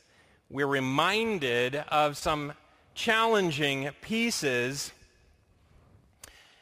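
A speech clip with one short concealed packet loss at about 2.19 to 2.23 s, right after "we're reminded of". Roughly 20 ms of audio failed to reach the decoder in time, and the receiver patched about 17 ms of that gap by extending the preceding sound before crossfading back into the real signal. The result is a brief smear or wobble in the speech, where the synthesized fill briefly replaces what was actually said.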